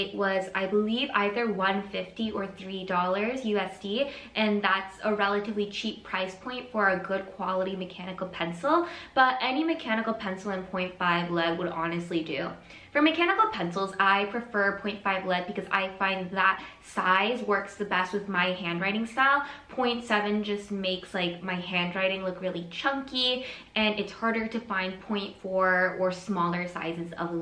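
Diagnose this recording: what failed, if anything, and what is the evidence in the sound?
Nothing stood out on listening that would point to a failure at any stage of the chain.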